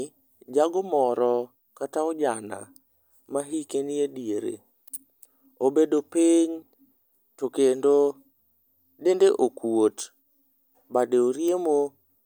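No technical faults are audible.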